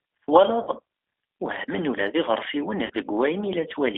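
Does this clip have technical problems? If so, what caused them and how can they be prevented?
Yes. G.729 codec damage runs throughout the speech: an 8 kbit/s coder rebuilding each 10 ms frame from a vocal tract filter, pitch predictor and a few pulses, within a roughly 300 to 3500 Hz line band, leaving it rough, synthetic and muffled. Using a wideband codec such as Opus or G.722 prevents this.

VoIP packet loss concealed by the speech codec occurs at 0.63 to 0.69 s and at 2.86 to 2.91 s, just after "ula d iɣersiwen". Each gap fits about 40 ms of lost packets. The decoder stretches its last pitch and filter into a fading buzzy tone or coloured noise, and the sound stays weak briefly after packets resume. A jitter buffer with forward error correction, or a more reliable network path, prevents it.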